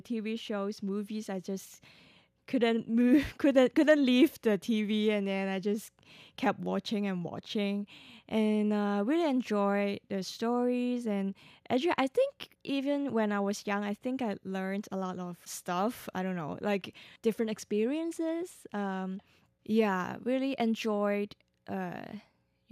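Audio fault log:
No fault found in this speech clip.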